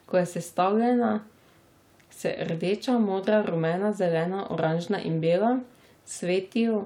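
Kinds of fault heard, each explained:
No faults are audible anywhere in this speech.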